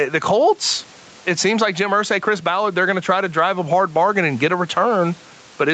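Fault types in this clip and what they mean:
Gain pumping: the gain swings by about 15 dB, squashing loud and soft parts closer in level, likely a fast limiter fighting excessive microphone gain.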